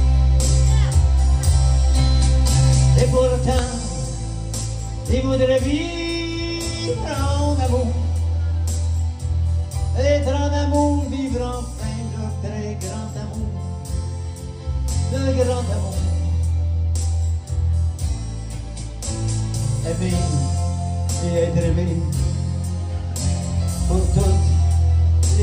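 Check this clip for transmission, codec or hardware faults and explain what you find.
One fault is present: a loud pop at 3.59 to 3.61 s. A single sharp click peaks about 10 dB above the sound, which continues underneath. It is likely a voltage spike from a switch, plug, static or driver glitch.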